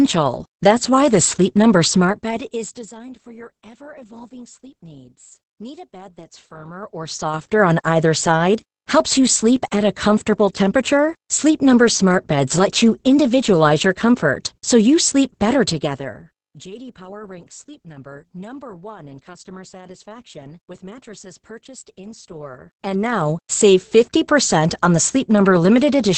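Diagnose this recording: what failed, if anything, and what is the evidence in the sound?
The codec stage failed: Opus voice compression throughout the speech, with nothing above 8.7 kHz. Heavy coding damage leaves the voice muffled, hoarse and slightly robotic, which fits SILK linear-prediction coding at wideband, starved to around 10 kbps, so the excitation is coarsely quantised.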